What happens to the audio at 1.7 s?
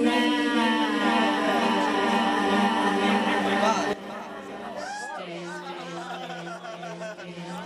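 Nothing goes wrong at 1.7 s: the audio plays through that moment intact, with no dropout, click, distortion or other fault.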